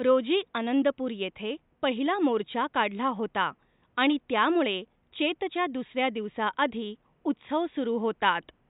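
A speech recording with nothing technically wrong with it, the faint room noise sitting about 44 dB below the speech being part of the recording itself.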